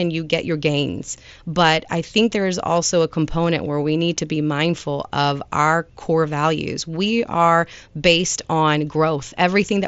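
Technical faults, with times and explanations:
No faults; the speech arrives over a Bluetooth mSBC headset link at about 61 kbps, with the band stopping near 7.7 kHz as expected for that wideband codec.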